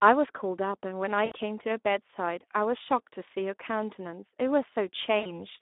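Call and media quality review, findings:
Speex codec, throughout: hoarse, noisy speech with a band-limited line from 250 Hz to 3.6 kHz. Damage is plainly audible and sounds like roughly 11 kbps CELP excitation. It is steady and constant, not intermittent like loss.

VoIP packet loss concealed by the speech codec, 1.25–1.32 s: a short stretched sound that fades, covering about 60 ms, which fits three 20 ms frames. The decoder extrapolated its last pitch and filter. This is a decaying smear, not a silent gap or click.

VoIP packet loss concealed by the speech codec, 5.19–5.46 s: the same fading stretched sound after about 60 ms lost, with speech staying weak or distorted until 5.46 s while decoder state rebuilds. The slow recovery separates it from a simple dropout.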